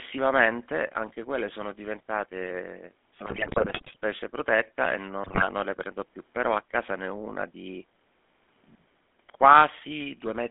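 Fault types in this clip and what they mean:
GSM full-rate codec: The whole clip is speech through the original GSM full-rate codec. This coder models the vocal tract and drives it with a sparse, regularly spaced pulse train, so fine detail in the excitation is lost. The result here is a plainly audible buzzy, gravelly roughness. The band is held to roughly 200 Hz to 3.5 kHz, so it sounds thin and muffled. All of this fits a 13 kbps stream.
GSM bit errors: Flipped bits reached the decoder and corrupted its filter, pitch and gain values. The sound bent into squawks, pops and gargling. The longer burst runs from 3.26 to 3.96 s, right after "anche quelle sono diventate" and ending before "protetta e". A shorter one follows from 5.24 to 5.48 s, between "protetta e" and "le prendo più". The damage points to a few percent of bits being hit.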